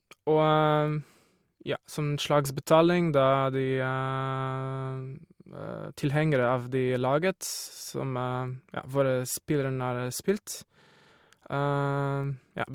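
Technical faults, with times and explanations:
Throughout: transcoding between lossy codecs. The speech carries two overlapping sets of coding artefacts rather than one consistent kind, which sets it apart from a single low-bitrate encode. The pattern fits an MP3 stage at around 96 kbit/s followed by Opus at around 48 kbit/s. The later encoder appears to spend bits re-coding the earlier smearing while adding its own. Nothing is present above 20.3 kHz, the lowest ceiling left by the chain. This is the likely cause.
10.82 to 11.10 s: system hang loop. A single 46 ms slice of speech repeats exactly six times, which fits a 2048-sample ring buffer cycling while the system stalled. At a 21.5 Hz repeat rate, it comes across as a rapid mechanical stutter rather than a steady buzz. Because each repeat is identical, it differs from a dropout or jitter glitch, where audio would vanish or shift. About a third of a second of real audio is lost under the loop.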